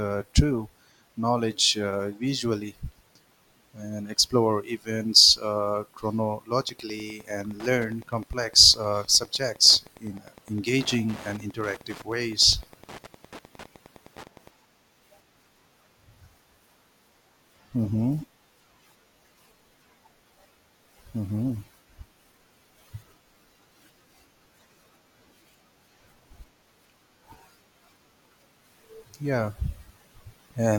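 From 6.52 s to 14.52 s the speech carries Wi-Fi interference: a steady ticking about ten times a second, sitting roughly 25 dB below the voice. A nearby Wi-Fi radio's beacon, repeating every 102.4 ms, is being rectified by the audio circuit and turned into audible clicks. On a spectrogram this shows as thin vertical broadband lines evenly spaced about 0.1 s apart; the waveform shows a regular train of small spikes riding on the speech.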